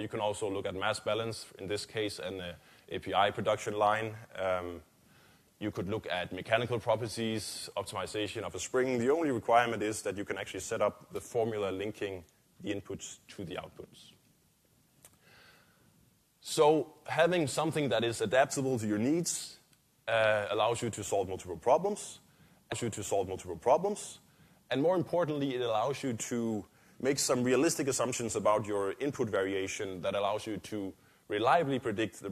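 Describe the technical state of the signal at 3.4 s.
Nothing at 3.4 s points to a technical fault; the signal there is intact.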